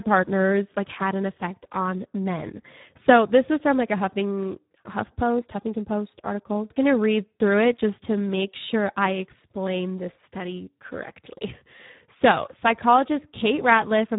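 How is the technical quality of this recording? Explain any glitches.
The technical quality is poor: the speech carries heavy Speex codec damage from start to finish. Across the whole clip the voice sounds hoarse and noisy, and nothing is present above 3.8 kHz. Speex is a CELP coder, so it models speech and spends its few bits on the excitation signal. Here that budget is thin, which fits a setting around 8 kbps, leaving a buzzy, grainy residue. Plain band-limiting would only dull the sound; this clip also sounds hoarse and noisy.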